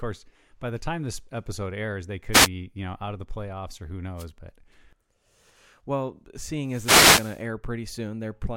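Wireless microphone noise hits at 2.32–2.48 s, after "this episode airs they", at 4.17–4.26 s, after "the playoffs or who", and at 6.62–7.46 s. Each time the FM radio signal fades and receiver noise bursts through as static.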